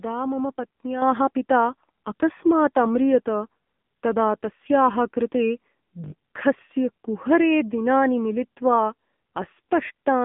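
Throughout, the speech has gone through the AMR narrowband mobile codec at a heavy setting that points to a low rate near 6.7 kbps. The line band runs from about 150 Hz to 3.5 kHz, with nothing above 3.6 kHz, so the voice sounds thin, buzzy and synthetic.

At 0.56 s, a repeated buffer occurs: fresh audio arrived late, so the device replayed the previous 20 ms slice once, which fits a 20 ms buffer. The hard joins make a brief buzzy click, and roughly 20 ms of real audio is lost.

At 1.02 s, just before "पिता अकस्मात्", the microphone volume is stepped up: the call software judged the input too quiet and raised the device gain in one jump of about 6 dB. Voice and background suddenly get louder together.

From 6.04 to 6.12 s there is another repeated buffer. This time the same 20 ms piece plays four extra times, giving a short mechanical stutter with a hard edge at each repeat, and about 70 ms of real audio goes missing.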